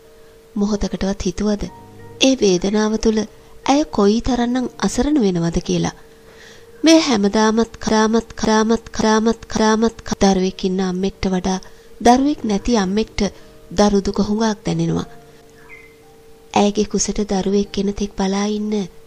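From 7.89 to 10.13 s the audio falls into a broken-record loop: one 0.56 s fragment plays four times back to back, each copy identical, with no decay as an echo would have. Likely a stalled player or stream resending its last fragment, losing the audio that belonged there.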